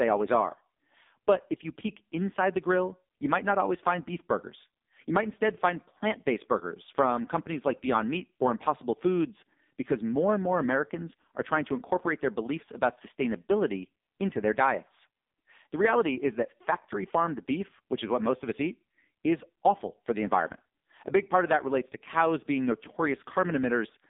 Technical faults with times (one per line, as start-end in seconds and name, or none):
0.00-24.09 AMR narrowband mobile codec